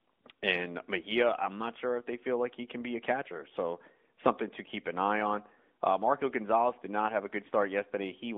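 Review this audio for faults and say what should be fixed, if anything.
No faults found; nothing needs fixing.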